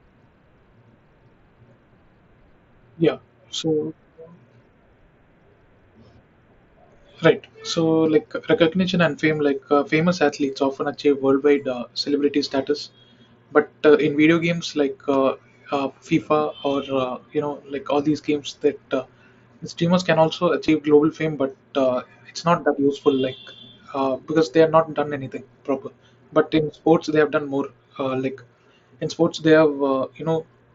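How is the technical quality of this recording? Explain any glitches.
The recording has one glitch: a concealed Bluetooth headset packet loss at 20.67 s, between "streamers can also" and "global fame but uh". About 15 ms of audio never reached the phone, which fits two consecutive lost mSBC frames. The receiver filled the gap by repeating the best-matching stretch of the preceding waveform. Because two frames were lost in a row, the patch sounds like a brief buzzy tone, with a small warble where real audio resumes. The speech passes through the wideband mSBC headset codec, with content up to 8 kHz and light codec grain on louder sounds.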